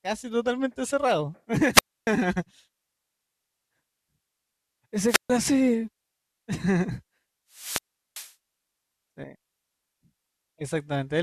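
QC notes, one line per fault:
1.72–2.07 s, wireless microphone squelch dropout. The radio signal fades and hiss rises briefly. The receiver's squelch then mutes the output for about 0.28 s, leaving a hole of near silence before the speech returns.
5.07–5.30 s, wireless microphone squelch dropout. This is a shorter fade. The mute lasts about 0.14 s.
7.51–8.34 s, wireless microphone squelch dropout. This is the longest event. Static builds, then the squelch gates the output for about 0.38 s.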